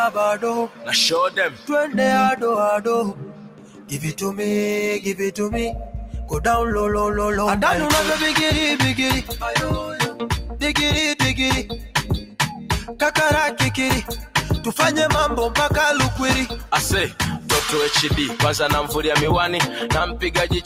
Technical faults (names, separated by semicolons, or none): noise suppressor applied to music or sounds; sound cut by the noise suppressor